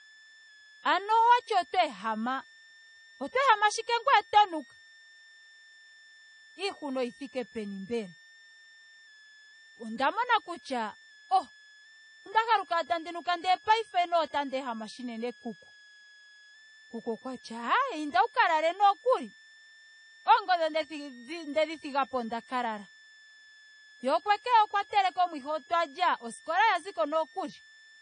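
A thin, high whistle sits under the speech for the whole clip, wandering between about 1.68 and 1.86 kHz at roughly 30 dB below the voice. This is a switching supply whistle: a switch-mode power supply running in an audible burst mode or beating with another one.

The speech sounds dull and smeared, with nothing above 9.5 kHz and a plainly audible warbling, fizzy texture on sibilants and held sounds. The likely cause is AAC compression, with coarse quantisation and a lowered cut-off that fit a bitrate around 32 kbps.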